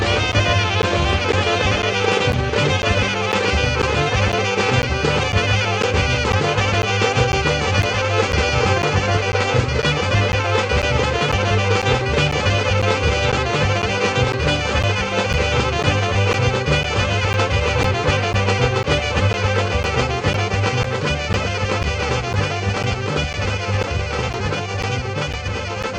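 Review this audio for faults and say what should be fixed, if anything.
A dry, full-band echo trails the whole clip, about 1.5 s behind and some 5 dB quieter. This is a doubled audio track, likely from a second capture path or an edit holding two copies. To prevent it, route only one input into the recording and check edits for overlapping copies.

Short ticks repeat every 0.5 s from 0.32 s to 25.84 s, each a gap of roughly 10 ms of silence. These are periodic USB or driver dropouts, where a background task stalls the bus or driver. To prevent them, disable the interfering task, update the driver, or use a different USB port.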